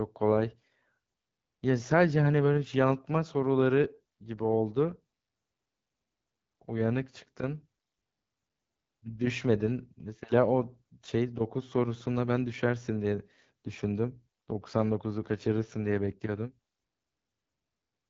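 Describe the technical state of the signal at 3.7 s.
At 3.7 s the speech carries AMR wideband (HD Voice) codec damage, present throughout: a low-rate, pulse-driven vocal tract model makes it rough and raspy, consistent with the 8.85 kbit/s mode. Unlike narrowband telephony, the band still extends to about 7 kHz, with nothing above 7.5 kHz.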